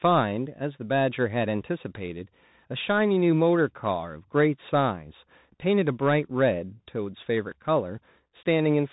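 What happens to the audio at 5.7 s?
At 5.7 s the speech carries Bluetooth CVSD headset codec damage, as it does through the whole clip. Each sample is a single up-or-down bit, which fits a 64 kbps link. Nothing above 4 kHz survives. S sounds turn scratchy over a granular hiss.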